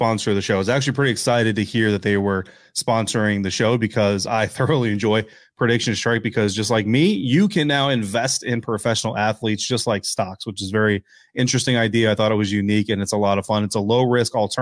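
No technical faults can be heard anywhere in the speech. There is nothing to mark at any point in the recording.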